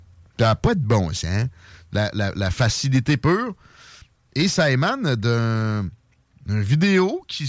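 A speech recording with nothing technically wrong in it.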